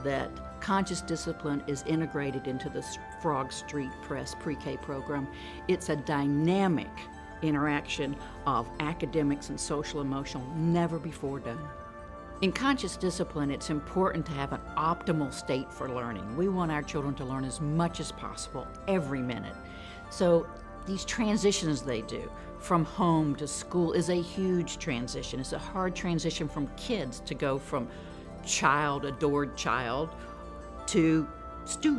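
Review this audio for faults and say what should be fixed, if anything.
Nothing needs to be fixed, as no faults can be heard in this audio.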